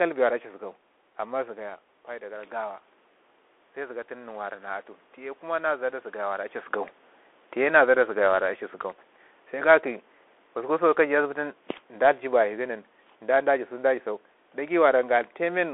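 The whole clip passes through a Bluetooth CVSD headset codec, which fits a 64 kbps link. Nothing above 3.8 kHz survives. Sibilants turn scratchy over a granular hiss.

From 1.46 to 6.6 s, automatic gain rises. The talker moves back around 1.5 s, dropping the level about 10 dB, and the gain climbs about 6 dB to compensate. Voice and room noise swell together.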